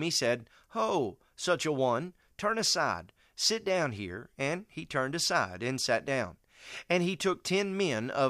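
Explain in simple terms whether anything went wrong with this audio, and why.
Nothing went wrong; no audio faults can be heard.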